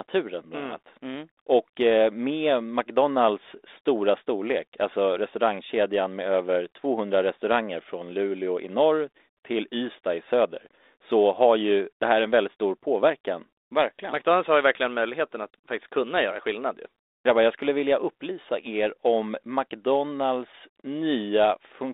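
No technical faults are audible.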